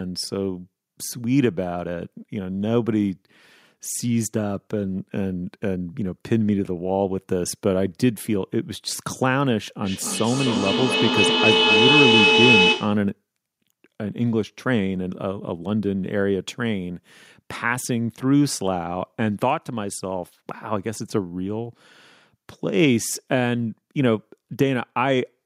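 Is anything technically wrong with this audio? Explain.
Yes. From 9.83 s to 13.11 s there is feedback howl. Two devices on the same call in one room form a loop: the loudspeaker's output re-enters the microphone and returns with more level each pass, so repeats grow rather than decay and narrow onto the frequency the loop favours. Here that is a tone around 3 kHz, pulsing roughly every 300 ms with the loop delay, peaking about 4 dB above the speech before it stops.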